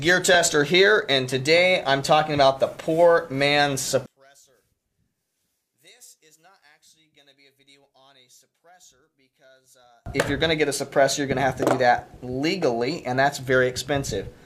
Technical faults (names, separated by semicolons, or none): one channel inverted